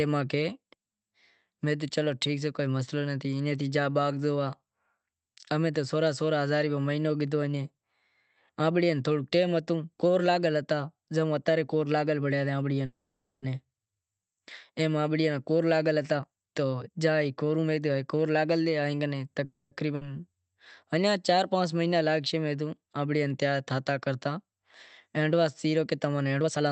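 At 12.85 to 13.45 s the speech stops in a call audio freeze, likely because packets stalled in transit and the jitter buffer ran dry. The receiver carries the last sound on as a fading buzz or hiss, with about 490 ms falling to silence, and then resumes exactly where it left off, so roughly 570 ms of delay is inserted and nothing is lost.

From 16.16 to 17.95 s a jitter buffer speed-up follows. The buffer had grown past its target delay, so the receiver repeatedly trimmed out pitch-period-sized slices to shed roughly half a second. The speech runs at about 131% speed without any pitch change and sounds hurried.

A shorter freeze of the same kind comes at 19.45 to 19.74 s. It is a 260 ms stall with about 110 ms of silence, after which playback picks up again with nothing skipped.

Right after it, at 19.95 to 20.07 s, there is a burst of packet loss. About 60 ms of audio never arrived in time, so the receiver stretches the preceding sound into a brief decaying fill and then jumps ahead, leaving that stretch missing.

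At 26.41 to 26.70 s a second speed-up compresses the ending to about 150% speed, trimming roughly 150 ms, so the final syllables sound rushed. The Opus coding in the call path cuts off the treble above 8 kHz.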